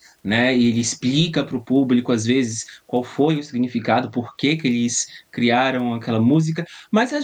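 From 3.37 to 4.37 s, after "às vezes qual foi" and before "que que eles criaram", the speech shows channel delay (comb filtering): one channel lags by around two samples, and mono summing cancels a notch near 10 kHz, leaving the top end dull.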